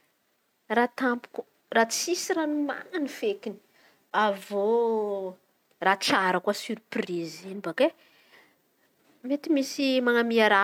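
No technical faults can be heard anywhere in the speech recording. Nothing in the signal chain audibly goes wrong at any point.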